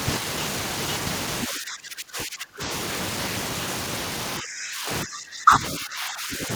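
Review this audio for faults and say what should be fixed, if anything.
Speech suppressed in double talk occurs at 1.46–2.62 s, 4.4–5.63 s and 5.79–6.5 s. The speech drops by about 25, 20 and 15 dB, appearing as faded spectrogram bands and a shrunken waveform envelope. The likely cause is an echo canceller attenuating everything while the far side spoke. To prevent it, tune the canceller's double-talk detection so near-end speech is held at full level.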